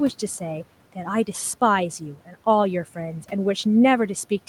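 At 2.26 s the speech is cut by the noise suppressor. The suppressor mistakes a short stretch of speech for background noise and turns it down along with the room noise, which sits about 24 dB below the speech. The level falls by as much as about 9 dB until 2.35 s, roughly a tenth of a second in all. That part sounds swallowed and faint.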